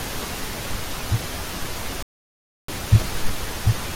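A speech clip with a playback stall: at 2.03 s the audio cuts off mid-flow and stays silent until 2.68 s, a gap of about 0.66 s. On a waveform it shows as a flat line, and on a spectrogram as a blank vertical band, likely from the player running short of data.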